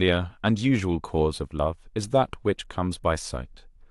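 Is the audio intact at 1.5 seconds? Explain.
Yes, at 1.5 seconds the speech plays through intact, with no dropout, click, distortion or other fault to be heard at that moment.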